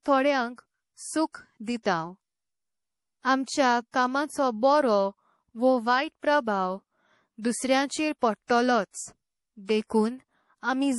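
Across the whole clip the speech sounds watery and swirly, with smeared attacks and a metallic chirp on s sounds, and nothing is heard above 11.5 kHz. This is likely MP3 compression at a low bitrate, plainly audible here and consistent with roughly 48 kbps. Starved of bits, the encoder cuts the treble at a fixed point and drops weaker frequency lines, which flicker in and out from frame to frame.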